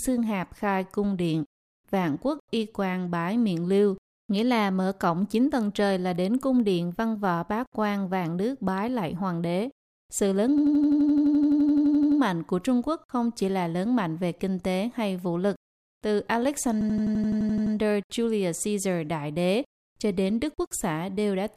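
At 10.58 s and again at 16.81 s the audio seizes in a system hang loop. A stalled driver leaves the hardware replaying one 85 ms slice, which fits a 4096-sample buffer, as an 11.7 Hz machine-gun stutter until 12.20 s, before "mạnh của", and until 17.75 s. Unlike a dropout, there is no silence, only identical repeats.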